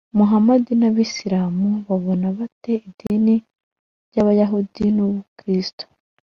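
At 3.07 s, a gap between stream segments opens. Two segment timestamps fail to meet, so silence fills in. A hard-edged 33 ms hole cuts the speech.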